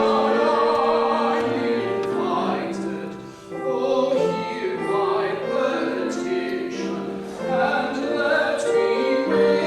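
No technical faults can be heard anywhere here.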